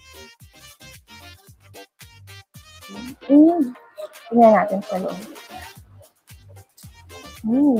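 A speech-tuned noise suppressor is running on this sound throughout, treating sustained parts as noise, so levels pump and tails thin out, swinging around 5 dB. From 1.37 to 1.72 s the suppressor cuts this stretch harder, dropping it by about 8 dB so it sinks for roughly a third of a second.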